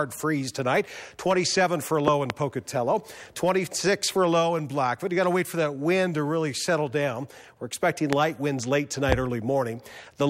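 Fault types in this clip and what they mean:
Loud pop: a sudden voltage pulse, likely from a plug, switch or static, jumps about 20 dB above the continuing sound. Two pops at 2.08–2.32 s, single ones at 8.13–8.15 s and 9.12–9.14 s, each a narrow waveform spike and full-height spectrogram stripe.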